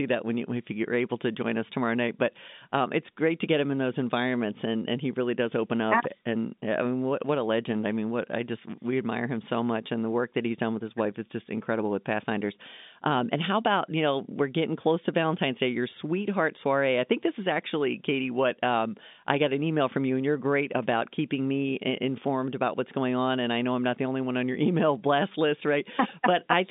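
Nothing's wrong here: it's speech carried over an ordinary G.711 telephone line, so the sound tops out around 3.8 kHz the way a phone call does, and there's no fault to point to anywhere in it.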